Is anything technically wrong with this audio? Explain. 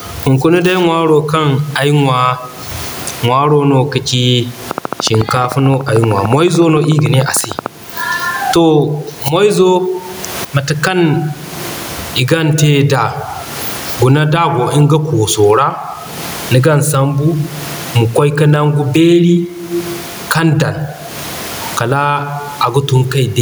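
Yes. Gain pumping runs throughout the speech: loud and soft parts are squashed closer in level, with the room noise about 38 dB below the voice and a gain swing of roughly 25 dB. The likely cause is excessive input gain with a fast limiter, shown as a breathing waveform envelope.

A train of clicks runs from 4.71 to 7.67 s: around forty regularly spaced ticks at 13.6 per second, peaking roughly 5 dB above the signal. These appear as thin vertical spectrogram lines, likely from interference or an interface fault.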